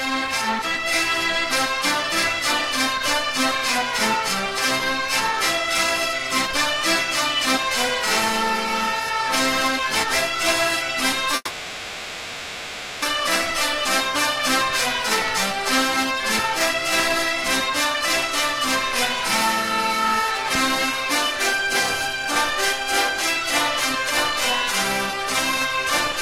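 At 11.35 s a call audio freeze starts and lasts until 13.04 s. The last sound is stretched into a fading buzz or hiss for about 1.7 s. Packets were likely held up in transit. Playback then resumes where it stopped, with nothing lost, just delayed.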